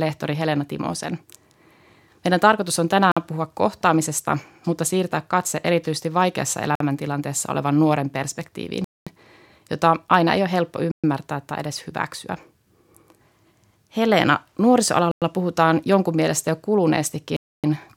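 The speech drops to dead silence six times: at 3.12 s for 48 ms, 6.75 s for 50 ms, 8.84 s for 222 ms, 10.92 s for 122 ms, 15.11 s for 103 ms, and 17.37 s for 272 ms, each time resuming abruptly. This is likely a Bluetooth stall, where delayed packets let the headphones' buffer run empty until retransmissions arrived. On a waveform each shows as a flat gap; a spectrogram shows a clean vertical blank band across all frequencies.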